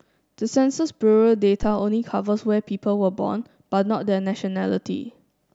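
At 1.63 s a deep, dull thump cuts into the speech and dies away by about 1.77 s, dropping off quickly with a decay of around 33 ms and peaking at about -16 dBFS. This is a phantom power thump: a supply voltage was switched on or off while the input was live, and that sudden DC step travelled through the coupling capacitors, arriving at the output as a single low-frequency pulse rather than as sound from the source.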